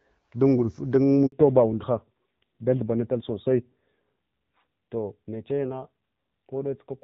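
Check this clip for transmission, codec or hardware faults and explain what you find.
There are two faults, and they hit back to back.

A handover gap runs from 1.26 to 1.32 s. The call was passed from one network to another, and for about 60 ms no speech frames came through. The voice dies away within a few tens of milliseconds, and it stays silent until the new link starts carrying audio. Whatever was said in that stretch is simply gone.

From 1.32 s to the end there's a fallback to narrowband. Once the new link picked up, the call left HD Voice at 12.65 kbit/s and dropped to the older narrowband codec at 7.4 kbit/s, which fits what you hear. Nothing above 4 kHz survives after the switch, so the airy top end disappears. The voice goes duller and rougher. Before the handover you can hear the wideband codec carrying the speech clearly.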